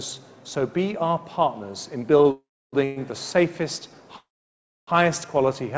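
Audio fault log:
2.22–2.28 s: short stall from a late packet. A packet arrived late and the jitter buffer ran dry, so the receiver stretched the last sound by about 28 ms until it came in, then resumed from the same point. Nothing is lost; the sound is simply held a touch too long, with a faint buzzy dip. Delay in the stream grows by those 28 ms.
2.31–2.75 s, 2.84–2.99 s, 4.16–4.90 s: call audio freeze. The audio halts and the receiver carries the last sound on as a fading buzz. In the first freeze it extends about 414 ms, about 300 ms of it silent. The second runs 117 ms with no silent part. The third lasts 712 ms, including about 640 ms of silence. The likely cause is packets held up in transit until the jitter buffer emptied. Playback then continues where it stopped, so the gaps are inserted rather than cut out. The clip is played late by the combined wait of these stalls. The call path above shows a bandwidth ceiling of 8 kHz, which fits a G.722 codec at 64 kbps.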